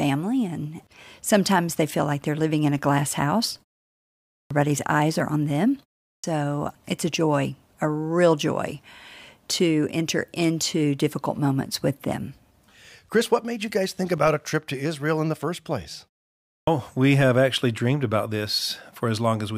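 At 4.36 s, 6.09 s and 16.54 s, speech returns after pauses with its onset cut away. This is clipped start after a pause. The output path sleeps during silence and wakes late, losing about 135 to 145 ms. Phrases like "eyes are on them" and "we have actually dreamed" begin abruptly.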